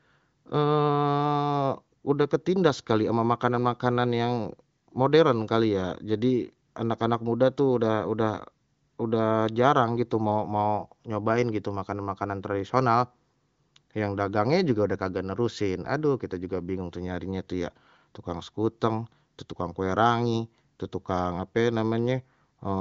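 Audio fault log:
No faults found; the band tops out near 7.5 kHz, as expected on an AMR wideband (HD Voice) link running what sounds like one of its higher rates.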